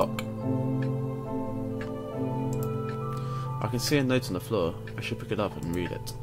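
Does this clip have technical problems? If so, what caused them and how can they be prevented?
Yes. From 2.74 to 3.36 s, four CD scratch ticks, each under a millisecond, recur about six times a second as a disc blemish overwhelms error correction on each revolution. They show as thin vertical spectrogram lines and tiny waveform spikes. Cleaning the disc or ripping with a secure, re-reading drive prevents this.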